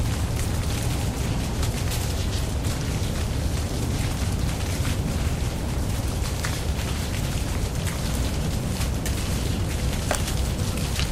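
From 1.04 s to 3.04 s the sound abruptly loses its clean top end: the treble turns thin and synthetic, with more codec smearing, then snaps back to full quality at 3.04 s with no gap either side. This is an adaptive stream at a lower bitrate. The player briefly switched to a cheaper rendition, which fits a drop from roughly 96 kbit/s AAC to about 48 kbit/s HE-AAC, whose treble is rebuilt by spectral band replication.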